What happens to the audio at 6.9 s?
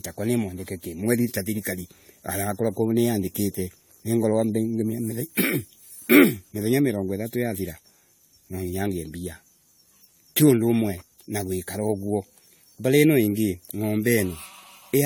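At 6.9 s, as throughout, the speech shows generation loss, likely from repeated lossy re-encoding, perhaps four times, consistent with 64 kbit/s AAC, leaving it swirly, hollow and smeared, with blurred attacks.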